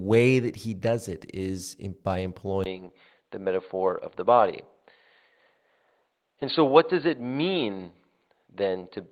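Lost packet rebuilt from error correction hits this speech clip at 1.57 s, between "that he does it" and "in by", then again at 4.37–4.51 s and 6.41–6.55 s. The decoder filled each gap with a rougher, noisier low-bitrate copy, so no dropout is heard. The first repair spans 20 ms, fitting one packet, and the later two span 80 ms each, fitting four. From 2.64 s, just after "in by", the input switched to a poorer device, likely a different microphone or headset profile. After a 20 ms silence, nothing remains above 4.5 kHz and a faint new noise floor appears, while the level stays about the same.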